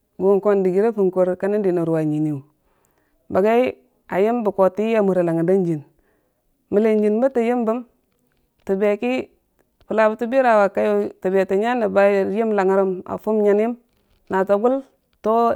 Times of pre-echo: none

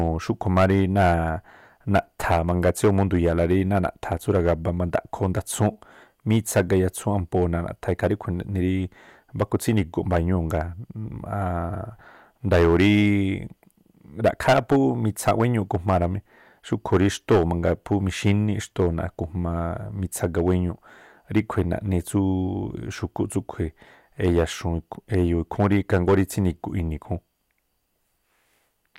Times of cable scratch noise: none

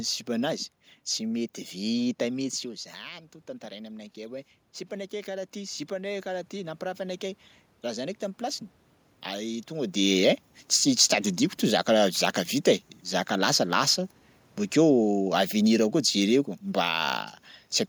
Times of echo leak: none

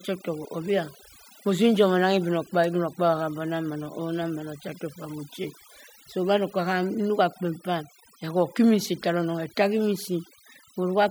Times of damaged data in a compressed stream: none

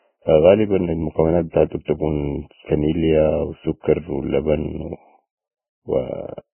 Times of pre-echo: 1.85-1.88

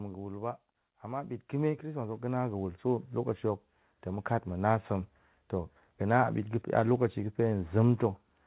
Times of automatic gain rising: 0.84-4.35

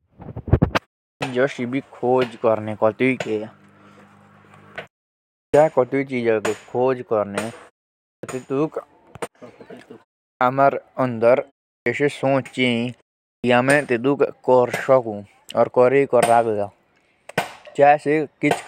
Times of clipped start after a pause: 1.16-1.21, 5.49-5.54, 8.18-8.23, 10.36-10.41, 11.81-11.86, 13.39-13.44

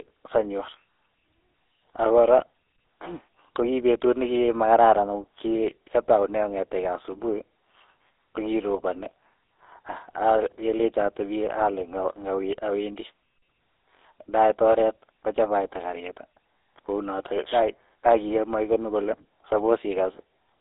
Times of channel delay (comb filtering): none

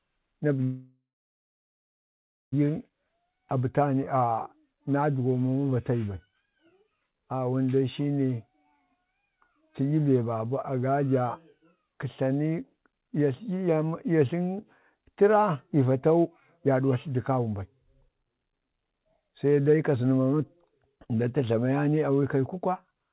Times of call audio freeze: 0.64-2.54

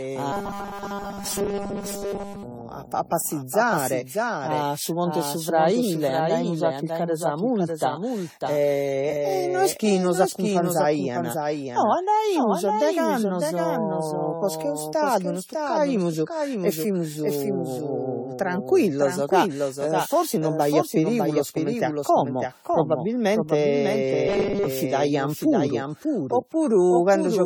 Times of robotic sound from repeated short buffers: 0.32-2.43, 24.28-24.66

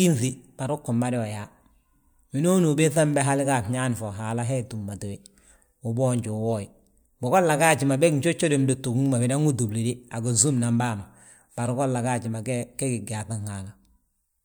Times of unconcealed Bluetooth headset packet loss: none

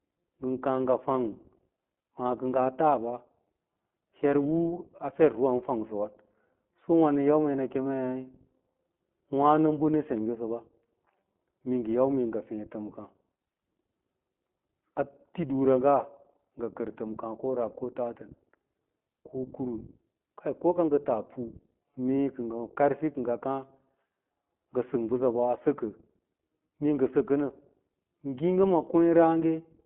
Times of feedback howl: none

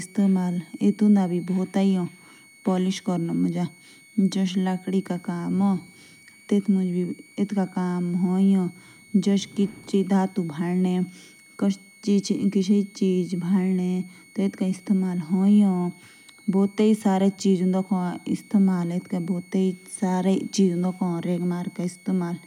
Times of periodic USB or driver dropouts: none

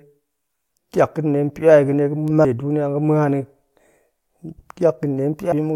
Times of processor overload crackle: none

